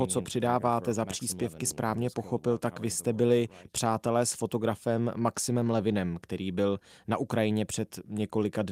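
No technical faults are audible.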